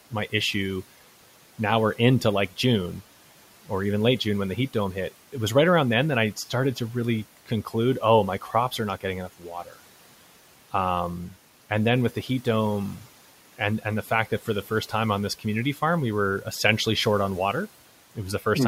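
Around 9.65 to 9.77 s there's a short stretch of speech cut by the noise suppressor. The suppressor misread a soft bit of the speech as background and pulled it down along with the room noise, by about 10 dB at its deepest, over roughly a tenth of a second. It comes across as a swallowed, faint moment, while the room noise sits about 22 dB under the speech.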